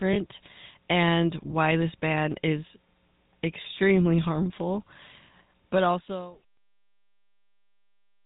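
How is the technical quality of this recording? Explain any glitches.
The speech has clearly audible codec damage throughout. GSM full-rate codec, throughout: the voice is rebuilt from a vocal-tract model driven by sparse, evenly spaced pulses, cutting everything above 4 kHz and leaving a buzzy, gravelly roughness that fits a 13 kbps GSM full-rate stream. The level fades smoothly out from around 5.5 s to 6.45 s.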